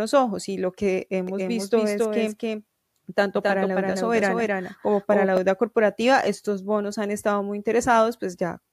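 From 1.27 s, after "ojos y lo que", a dry, full-band copy of the speech trails roughly 0.3 s behind, about 5 dB quieter, and stops abruptly at 5.37 s before "deuda corporativa estos bonos". This doubled audio track likely comes from a slower second capture path.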